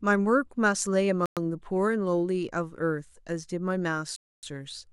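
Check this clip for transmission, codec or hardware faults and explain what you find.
Two dropouts stand out in this speech, and both look like a Bluetooth stall. The first runs from 1.26 to 1.37 s, a 110 ms gap, and the second from 4.16 to 4.43 s, about 270 ms. Each time the audio snaps to dead silence and then carries on. The likely cause is radio interference holding packets back long enough for the headphones' buffer to run empty, so playback simply waits until the retransmitted audio shows up.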